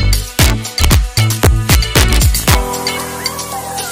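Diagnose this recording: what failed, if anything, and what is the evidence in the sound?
Integer overflow in the integer gain or sample-format conversion stage. Throughout the recording, the loudest peaks produce sharp, violent cracks rather than flattened clipping. The signal is driven about 2 dB past full scale, so a small fraction of samples, well under one percent, wrap to the opposite extreme instead of being limited.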